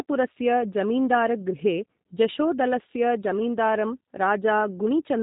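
Speech carried through a G.729 codec for its whole length, with plainly audible damage. Nothing passes above about 3.8 kHz, and the voice is rebuilt from a vocal tract filter, pitch predictor and sparse pulses, giving a rough, slightly synthetic texture that fits an 8 kbit/s G.729A stream.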